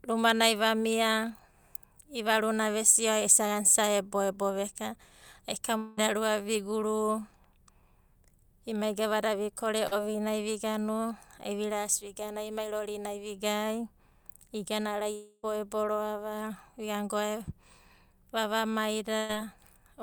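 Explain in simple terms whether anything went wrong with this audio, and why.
Yes, a few things went wrong, all caused by audio not arriving in time over the network.

Twice the connection likely stalled for a noticeable stretch, a long network dropout. The first runs from 5.77 to 5.99 s, with about 200 ms of speech lost. The second runs from 15.15 to 15.45 s, with about 280 ms lost. Each time, the receiver covered the hole by stretching out the last sound it had, so you hear a fading buzz or hiss rather than real speech. The second one ends with a tiny moment of silence before speech returns. The speech then picks up further along, and the lost part is simply gone.

Right after "emai gavada vikore", between 9.87 and 9.93 s, there is a short concealed packet loss. About 40 ms of audio never reached the decoder. The receiver guessed what should be there by continuing the previous sound and then blending back into the real audio. 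It comes across as a brief smear or wobble, and a quick sound in that spot can disappear.

From 19.17 to 19.31 s there is a burst of packet loss. Several pieces of audio in a row, about 120 ms in total, were lost or arrived too late to play. The receiver held the last sound and let it fade, giving a short buzz or hiss. Speech then resumes a bit further on, with that small piece missing.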